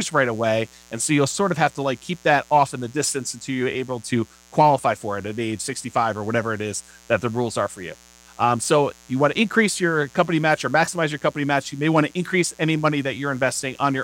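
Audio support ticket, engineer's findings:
Mains buzz, entire clip. Steady raspy buzz under the speech, roughly 30 dB below it. Sharp switching spikes twice per 60 Hz cycle, harmonics into the kHz range. Probable dimmer, rectifier or unshielded cable coupling interference into the signal path.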